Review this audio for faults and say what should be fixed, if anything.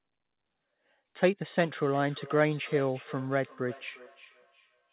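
From 1.56 s to the end there's a feedback echo between two devices: a second device in the room replays the call and the first mic picks it up again, its canceller blind to it. The repeats land roughly every 0.4 s, peaking about 21 dB under the speech, thinning within the 4 kHz narrowband. Mute one device's speaker or use headphones so only one endpoint plays audio into the room.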